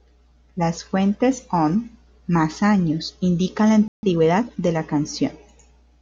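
At 3.88 s, right after "más años indican la", the speech cuts to silence for about 150 ms and resumes at 4.03 s. This is a playback stall, most likely the player running short of data or its output thread being briefly blocked.

From 4.03 to 4.63 s comes time-compressed catch-up. The player works off its backlog by removing small slices and cross-fading the joins, running the speech about 1.25 times faster. The pitch stays where it was, which separates this from a simple speed-up or tape-style fast playback, where the voice would rise. What gives it away is the hurried delivery.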